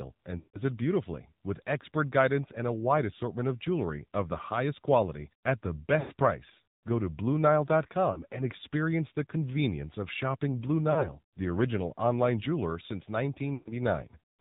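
AMR narrowband mobile codec runs through the whole clip. The speech is rebuilt from a pulse-driven vocal-tract model at a low rate, which fits the 7.4 kbps mode. Nothing above 4 kHz passes, and the voice sounds plainly buzzy, band-limited and synthetic.

Lost AMR speech frames occur at 0.38–0.63 s, 6.00–6.12 s, 8.12–8.24 s, 10.92–11.13 s and 13.54–13.73 s. When frames fail, the decoder repeats the last pitch and vocal-tract settings at falling gain. The longest runs, consistent with about 160 ms and 120 ms missing, smear and fade. The shortest only dip briefly.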